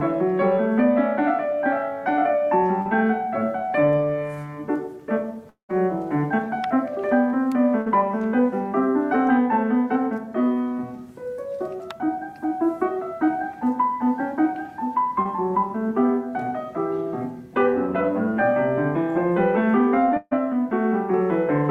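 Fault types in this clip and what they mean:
short concealed packet loss: About 40 ms of audio went missing twice, at 2.81 s and 15.22 s. The receiver bridged each hole by extending the preceding sound with about 40 ms and 30 ms of fill, heard as a brief smear or wobble.
long network dropout: From 5.49 to 5.71 s the sound carries on as a fading continuation of what came before, then falls to silence for about 110 ms. Around 200 ms of audio is lost before playback resumes further on, likely a network dropout.
burst of packet loss: Several consecutive packets were lost or late. At 7.81 s about 60 ms is missing, covered by a 50 ms fill. From 20.17 to 20.33 s about 140 ms is replaced by a decaying held continuation ending in a 20 ms silence.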